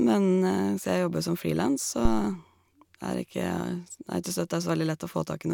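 At 2.05 s a supply on the live microphone input, most plausibly phantom power, was switched, and the voltage step travelled through the coupling capacitors into the signal path as a phantom power thump. Under the speech it lands as a deep, low-frequency thud peaking at about -11 dBFS, settling quickly with a decay of roughly 54 ms, and the disturbance has cleared by 2.29 s.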